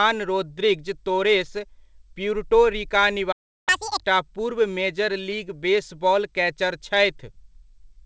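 At 3.32 s the speech cuts out abruptly and stays silent until 3.69 s, about 0.35 s; this playback stall likely came from the player running dry.

From 3.69 to 4.04 s the speech rushes at double speed, pitched up nearly an octave, as the player's catch-up at higher speed recovers lost time. All of this arrives through a WebRTC call path with nothing above 8 kHz.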